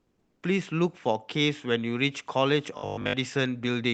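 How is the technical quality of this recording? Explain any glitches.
Two glitches stand out in the speech, both typical of a call connection whose audio tops out at about 8 kHz.

From 0.00 to 0.41 s there is comfort noise in place of the background. The sender stopped transmitting during the pause, likely through Opus discontinuous transmission, and the receiver synthesised a steady, featureless hiss about 3 dB quieter than the real background, which sits about 47 dB below the loudest passages.

From 2.78 to 3.16 s there is robotic sound from repeated short buffers. The receiver lacked fresh audio and kept replaying its last 20 ms block, likely a jitter-buffer underrun, so most of this stretch is repeats. The result is a rigid metallic buzz at 50 Hz.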